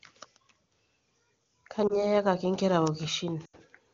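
Lost AMR speech frames occur at 1.87 to 2.04 s and again at 3.45 to 3.56 s. Speech frames were corrupted in transit, so the AMR-WB decoder filled each gap by repeating the last good pitch and vocal tract settings at falling level. The first gap, a single 20 ms frame, gives a brief dip or warble. The second, about four frames, drops to near silence within two frames before the speech returns thin for a moment.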